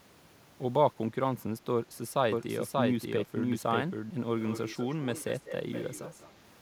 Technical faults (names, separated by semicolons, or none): doubled audio track; echo leak